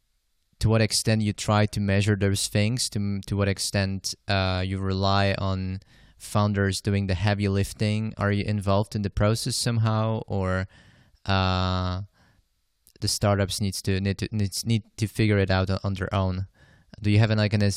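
No technical faults are audible anywhere in the speech recording.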